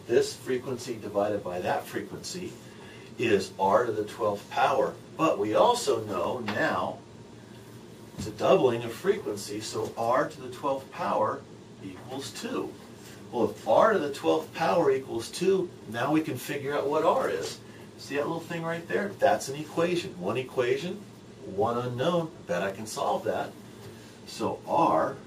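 A regular click runs through the audio from 0.77 s to 24.06 s. It repeats every 1.37 s, about twenty times in all. The pattern points to clock drift buffer slips. The likely cause is two devices running on separate clocks that disagree by around 200 parts per million. The buffer between them drifts until a small block, roughly fifteen samples, is dropped or repeated. Each slip breaks the waveform and makes the click.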